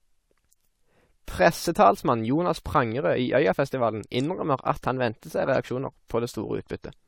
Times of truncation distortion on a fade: none

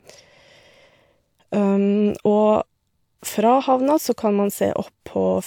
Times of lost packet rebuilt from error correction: none

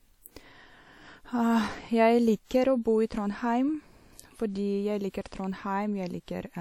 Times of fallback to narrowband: none

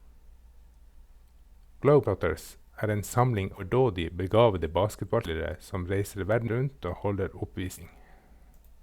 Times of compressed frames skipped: 2.05-2.08, 3.57-3.63, 5.25-5.28, 7.77-7.82

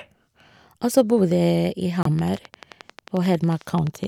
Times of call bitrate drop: none

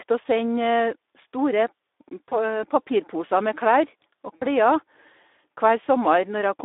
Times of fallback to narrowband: none

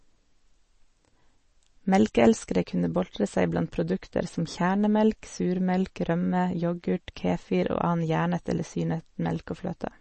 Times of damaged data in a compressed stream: none

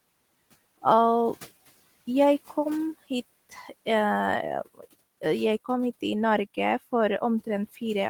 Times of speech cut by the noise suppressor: 3.49-3.87, 4.65-4.94

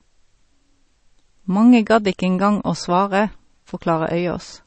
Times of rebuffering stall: none

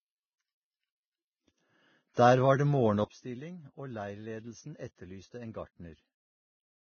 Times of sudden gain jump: 3.04-6.92

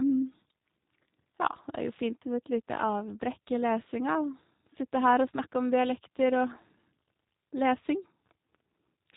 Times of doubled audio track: none

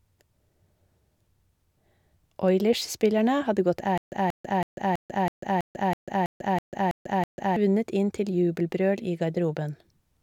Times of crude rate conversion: none

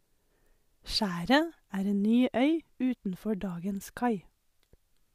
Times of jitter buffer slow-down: none

